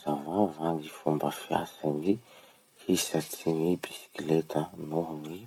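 No technical faults can be heard at any point in the recording.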